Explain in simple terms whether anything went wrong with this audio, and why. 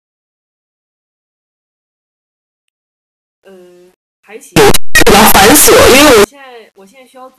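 Between 4.56 and 6.24 seconds the speech turns into a very loud, harsh distortion, with the quiet moments blasting as hard as the rest. That is the sound of signed and unsigned mixed up: the 8-bit samples were likely read with the wrong sign convention, which flips the top bit. Every time the waveform crosses zero, it jumps from one extreme of the range to the other instead of passing gently through the middle.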